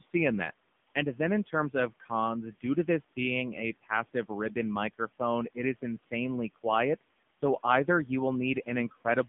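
A speech clip passed through an AMR narrowband mobile codec for its full length. Everything above 3.6 kHz and below 150 Hz is gone, and heavy coding damage makes the voice buzzy and synthetic, which fits a low AMR-NB mode near 6.7 kbps. Room noise sits about 21 dB below the speech.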